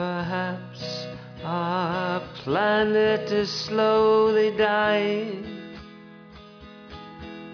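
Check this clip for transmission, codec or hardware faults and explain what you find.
I found no transmission, codec or hardware faults in this clip.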